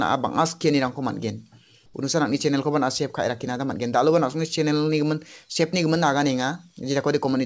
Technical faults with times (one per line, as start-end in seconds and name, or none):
1.86-1.94 comfort noise in place of the background